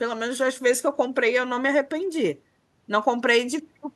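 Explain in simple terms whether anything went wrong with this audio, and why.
Nothing went wrong with this audio, because no technical fault can be heard anywhere in the recording.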